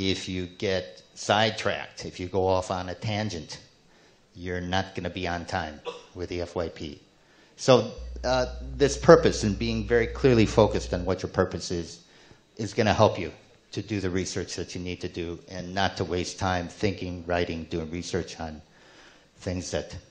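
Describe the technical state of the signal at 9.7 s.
At 9.7 s there's mains hum, running from about 7.98 s to 11.08 s: a steady 60 Hz drone with a few low harmonics, sitting roughly 10 dB under the sound. That's power-line energy leaking in, likely through a ground loop or a nearby transformer.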